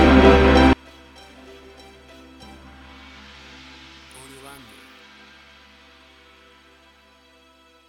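From 0.73 s to the end, summed to mono, the sound collapses by about 31 dB, leaving a faint residue. This is likely one channel inverted: with one side's polarity reversed, everything common to both channels cancels in the sum. On a waveform the mono trace shrinks abruptly at 0.73 s.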